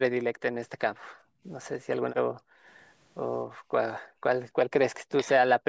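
Background gated by the echo canceller at 1.09 to 1.44 s, 2.24 to 2.65 s and 3.51 to 3.71 s: while the far end played through the loudspeaker, the canceller clamped the microphone. The room tone sinks by about 36 dB, about 35 dB and about 22 dB, then returns once the canceller releases.

Speech suppressed in double talk at 4.13 to 4.24 s and 5.15 to 5.28 s: the talker's speech drops away for a tenth of a second or less, by roughly 35 dB and then by a shallower 25 dB or so. Both sides were likely talking at once, and the canceller, unable to separate the talker from loudspeaker echo, turned everything down.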